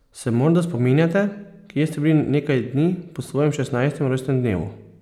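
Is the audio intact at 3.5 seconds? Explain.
Yes, the speech at 3.5 seconds is intact, with no audible dropout, glitch or distortion at that moment.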